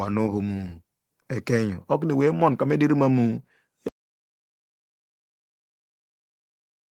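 Speech that cuts off abruptly at 3.88 s and falls into silence through to the end, with no room tone or trailing sound left behind. This is an audio dropout to silence, likely from the input being lost while recording continued writing silence. The preceding speech carries only light Opus voice compression.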